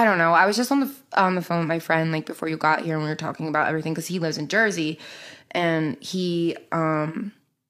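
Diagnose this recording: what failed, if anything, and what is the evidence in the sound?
No fault can be heard.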